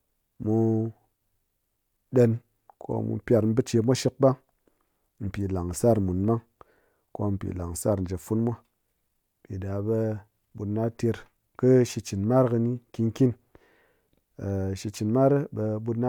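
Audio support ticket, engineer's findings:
Engineer's findings: no audio faults found in this speech clip.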